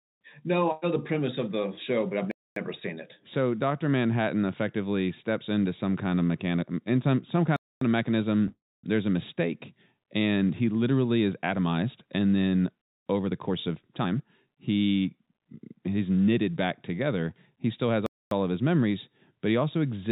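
The first hard-edged hole lands at 2.31 s. It's a gap between chunks: the audio was split into 5-second pieces and each join got 0.25 s of dead air, so nothing is lost, it just stops and restarts abruptly. The same clean-edged dropout repeats at 7.56 s, right after "mechanic in some some" and before "of mechanism", then at 12.81 s and 18.06 s, a steady rhythm you can almost predict.

Just after "of mechanism", from 8.48 to 8.85 s, there's a call audio freeze. The last bit of sound gets stretched into a fading buzz, then drops to silence for roughly 0.26 s of that stretch, and the audio picks up where it left off. The likely cause is packets held up in transit so the jitter buffer ran dry. About 0.35 s of delay gets added, but nothing is actually missing.

Then between "is atomized and then" and "he's knitted back together", from 13.26 to 15.46 s, you get a jitter buffer speed-up. The receiver had more audio queued than it wanted and trimmed short pitch-period slices over and over, shaving off about 0.4 s in total. 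The result runs at around 116% speed with the pitch unchanged, so that phrase sounds noticeably rushed. Throughout, the G.711 call path's narrowband character shows, with nothing above 4 kHz.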